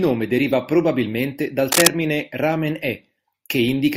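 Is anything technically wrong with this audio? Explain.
Yes. From 1.72 to 1.88 s there is cable scratch noise, most likely from a worn cable or connector being moved, so its contact resistance jumped erratically. That injects a dense, ragged burst of rustling scratch, roughly 5 dB louder than the speech, for about 0.16 s.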